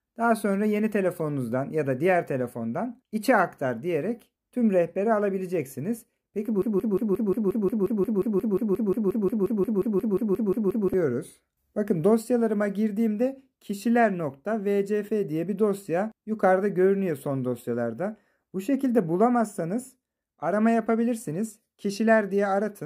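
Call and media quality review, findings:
Broken-record loop, 6.62–10.94 s: one 178 ms piece repeats back to back, 24 times. Likely a player or stream stall resending its last fragment; the real audio there is lost.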